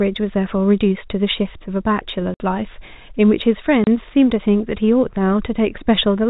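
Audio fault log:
2.34 s to 2.40 s: packet loss filled with silence. The sound stops dead for 60 ms, which points to two consecutive lost 30 ms packets replaced by digital silence. The abrupt cut and restart leave hard edges.
3.84 s to 3.87 s: packet loss filled with silence. A single 30 ms hole, fitting one lost packet, again with hard edges. Around both gaps the G.711 telephone band stays limited to below 4 kHz.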